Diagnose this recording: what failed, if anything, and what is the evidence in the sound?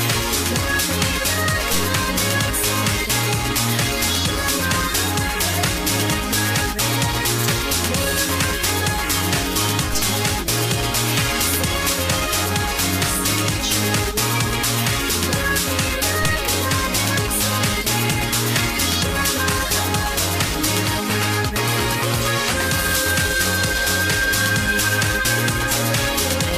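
A DC step occurs at 9.93 s, heard as a single low thump while the sound carries on unchanged. The waveform's zero line jumps abruptly by about -18 dBFS, consistent with the converter or analogue input stage introducing an offset, such as a recalibration or an offset-carrying source being switched in. The offset does not hold: it relaxes back toward zero in the manner of a roughly 2 Hz high-pass, so the thump is a brief low-frequency transient rather than a lasting shift.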